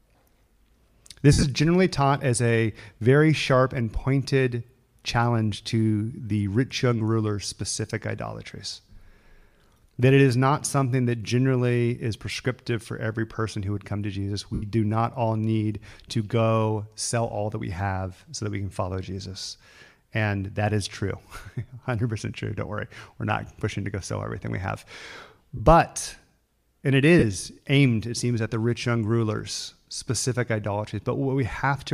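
Lost LE Audio frames at 1.32–1.44 s (before "generally taught as a"), 14.54–14.63 s (before "do not all need"), 25.57–25.60 s, and 27.19–27.23 s (between "and it" and "aimed it seems at"). In each gap the decoder repeats the last spectrum with scrambled phase, so the speech blurs into a brief noisy smear. The first gap is the longest, about 90 ms of losses spread over roughly a tenth of a second. The others last about 83, 23 and 30 ms, which fits dropped 7.5 ms frames from the likely LC3 link.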